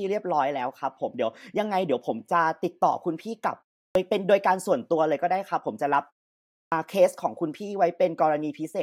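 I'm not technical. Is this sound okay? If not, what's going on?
No. The playback device dozes off during short silences and takes a moment to wake up. This causes a clipped start after a pause at 3.91 s and 6.68 s: after quiet gaps of 0.36 and 0.65 s, roughly 40 ms of the returning speech is lost, so the words begin abruptly.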